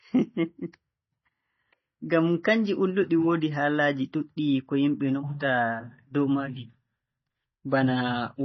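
Throughout, likely heavy MP3 compression cuts everything above 5.9 kHz and drops weak frequency lines from frame to frame, leaving the speech dull, watery and swirly.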